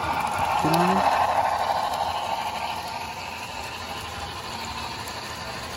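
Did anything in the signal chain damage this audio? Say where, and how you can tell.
No, nothing in the signal chain stood out as damaging this audio when I listened to it.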